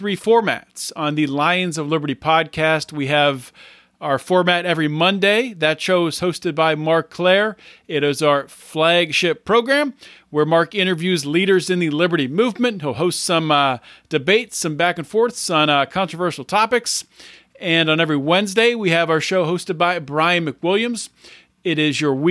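Listening to the speech in this recording, nothing stood out as a technical problem at any point.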